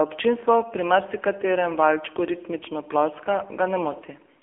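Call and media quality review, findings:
Throughout: thin, buzzy, synthetic speech, band 300 Hz–3.4 kHz, nothing above 3.5 kHz. AMR narrowband mobile codec, heavily coded; sound points to a low mode around 6.7 kbps.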